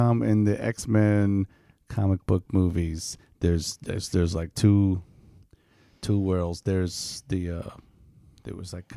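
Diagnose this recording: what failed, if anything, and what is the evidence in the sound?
Nothing failed; no fault is audible in this recording.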